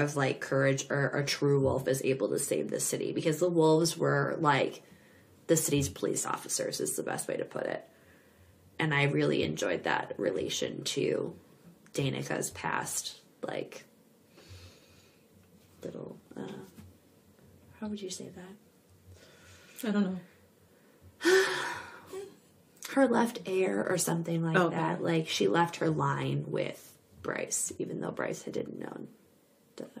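No technical faults are audible.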